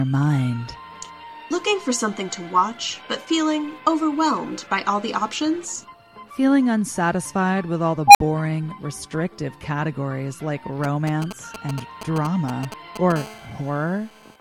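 At 8.08 s a recursive filter goes unstable, with bad coefficients letting its output grow without limit. A tone of about 700 Hz swells over roughly 74 ms into a loud squeal and clips. The numbers then overflow, and the sound drops out for about 53 ms before the filter resets at 8.20 s.

From 10.84 to 13.12 s, GSM signalling bursts come from a nearby 2G phone sending short groups of radio pulses while signalling. The audio circuit rectifies them into a galloping dit-dit-dit of brief 217 Hz buzzes, roughly 10 dB below the signal.

From 13.16 to 14.36 s the phone settles into a call, and GSM phone buzz follows as it transmits steadily at 217 bursts per second. Rectified, these pulses give a hard, raspy 217 Hz buzz rich in harmonics, unrelated to the audio and about 20 dB below it.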